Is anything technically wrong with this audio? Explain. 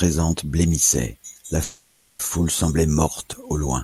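Yes. From 1.63 to 2.22 s the speech stalls into a fading buzz for about 0.56 s, then resumes intact: a call audio freeze, likely from delayed packets draining the jitter buffer.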